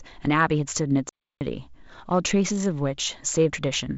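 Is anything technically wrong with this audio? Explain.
Yes, there's a playback stall from about 1.09 to 1.41 s, roughly 0.32 s where the speech just cuts out mid-flow and then picks back up. What you're hearing is the output going silent because the player most likely starved for data or had its audio thread blocked, so nothing reached the output until it caught up. The band-limited G.722 wideband telephone coding, with nothing above about 7.7 kHz, carries on through it.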